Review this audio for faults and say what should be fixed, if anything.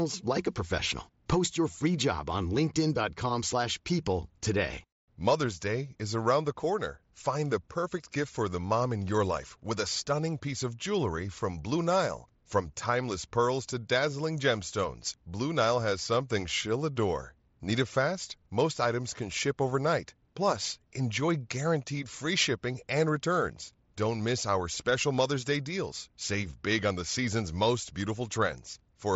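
Nothing here needs fixing. The speech comes through the Bluetooth mSBC headset codec as expected, with the bandwidth stopping around 8 kHz and only a light graininess on the louder moments.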